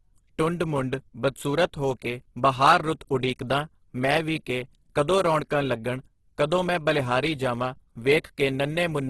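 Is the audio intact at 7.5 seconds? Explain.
No. At 7.5 seconds the speech carries the same damage heard through the whole clip, most likely from Opus compression at a very low bitrate, around 12 kbps. Starved of bits, the encoder fills bands by folding lower ones or with noise, so voiced sounds turn grainy and rough rather than swirly. On a spectrogram the bands look filled but smeared with noise, and everything stops at a sharp edge near 12.4 kHz.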